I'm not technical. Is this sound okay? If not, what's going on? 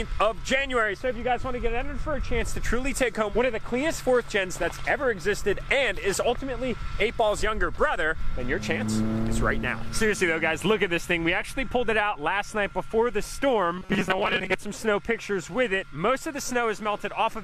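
No. From 13.77 to 14.55 s the sound turns into a rigid, metallic buzz at a fixed pitch of 188 Hz: robotic sound from repeated short buffers. Audio likely arrived too slowly, so tiny snippets of about 5 ms were replayed, roughly half the time. Unlike a dropout, nothing goes silent.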